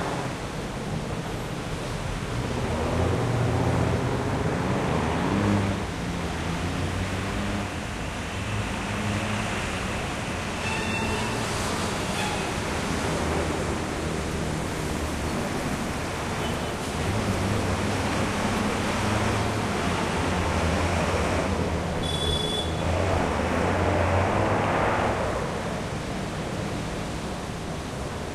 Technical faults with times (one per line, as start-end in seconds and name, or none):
10.16 dropped samples
11.05 dropped samples
12.20 dropped samples
17.55 dropped samples